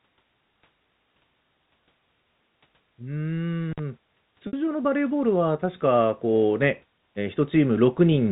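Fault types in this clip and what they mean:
Intermittent contact: Around 3.72 to 3.79 s the line opens for about 49 ms, crackling at both edges. Unlike a concealed packet gap, nothing is repeated.
Packet loss with pitch repetition: From 4.47 to 4.53 s, a 60 ms gap fitting two lost packets is bridged by a repeated pitch period that fades into silence, with no crackle.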